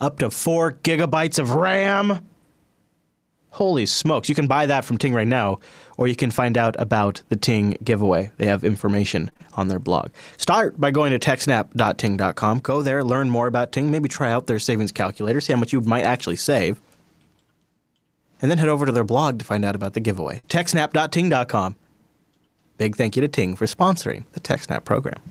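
A speech recording carries three kinds of packet-loss damage. From 9.25 to 9.47 s there is repeated packet loss, heard as a robotic sound. Three separate holes fall in that fifth of a second. Together they drop about 60 ms of audio, and the longest lasts 19 ms. The receiver patches each hole by stretching the last sound forward, so about a quarter of the stretch is synthetic. The result is choppy and mechanical, with bits missing. At 14.55 s, between "maybe try out" and "savings calculator see how", a lost packet was rebuilt from error correction. One 20 ms frame never arrived intact. The following packet carried a low-bitrate backup copy, and the decoder played that instead. There is no gap. That instant just sounds rougher and noisier than the audio around it. Just after "out about the giveaway", from 20.39 to 20.45 s, comes a short concealed packet loss. About 40 ms went missing. The decoder filled it by extending the preceding sound before blending back into real audio. 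It is heard as a brief smear or wobble. Overlapping it, from 20.43 to 20.49 s, another 40 ms was rebuilt from error correction, which points to two lost packets. That adds a short grainy patch as the passage recovers.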